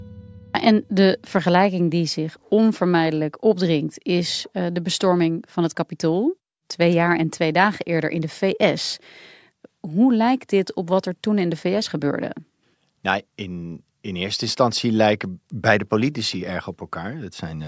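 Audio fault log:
15.0–16.5 s, resampler restarted on every block: just after "in in eerste instantie", regular ticks arrive four times a second, one every 250 ms, and only while speech is present. Each block's rate conversion, which fits 24 kHz down to 16 kHz, ran without its neighbours' samples, leaving a small error at every edge. A spectrogram shows thin vertical broadband lines at 250 ms spacing. The waveform shows tiny discontinuities at those boundaries.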